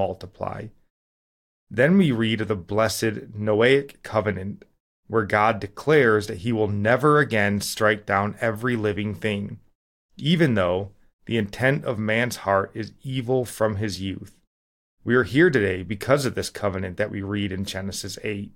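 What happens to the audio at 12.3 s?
Nothing goes wrong at 12.3 s; the speech there plays through intact, with no dropout, click, distortion or other fault.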